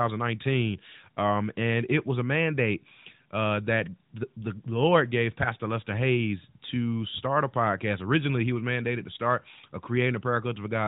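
No technical faults can be heard anywhere in the audio, so there is nothing to describe in time order.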